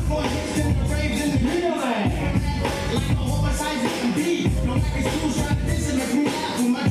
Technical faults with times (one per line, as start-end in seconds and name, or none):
none